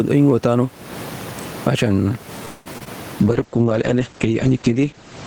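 Across the whole clip the level is pumped: the room noise sits about 34 dB under the speech, and the gain swings by roughly 20 dB. Loud and quiet passages sound pressed together and squashed. This gain pumping is likely caused by input gain set far too high for the microphone, with a fast limiter or compressor clamping down on every loud sound.

From 2.45 s to 2.68 s the sound stalls. The last moment of audio is stretched into a fading buzz or hiss for about 0.2 s, and then the speech picks up exactly where it stopped, with nothing lost but a gap inserted. This call audio freeze likely comes from packets held up in transit, so the jitter buffer ran dry and the receiver kept extending the last sound until fresh data arrived.

Right after it come three tiny smears, at 2.74 s, from 2.78 to 2.82 s, and from 2.84 to 2.88 s. Each sounds like a brief smear or wobble, and short consonant sounds can drop out. 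This is short concealed packet loss. About 20 ms of audio never reached the decoder each time, so the receiver filled the hole by continuing the preceding sound and then blended back into the real signal.

From 3.20 s to the end the speech turns rough and watery and loses its brightness, with the top end cut from about 20 kHz down to 8 kHz. This is a call bitrate drop. The bandwidth estimate fell, and the encoder was pushed from 40 kbps down to 9 kbps, where it stayed for about 1.5 s. At that rate Opus codes coarsely and trims the high frequencies.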